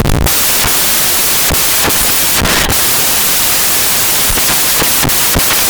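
From the first moment to the last, the speech is buried under harsh, loud white noise, the signature of samples built from the wrong bytes. The reader is pairing each sample's bytes incorrectly, whether shifted by one, swapped in order or misaligned, so the jittery low-order bits end up as the big part of every value.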